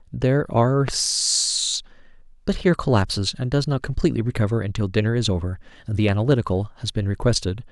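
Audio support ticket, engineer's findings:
Loud pop, speech, 0.88–0.91 s: single sharp pop; 6.09–6.35 s: double pop. Peaks about 10 dB above the speech, which continues underneath. Likely a voltage step from a connector, switch, static discharge or driver glitch, shaped by downstream circuitry.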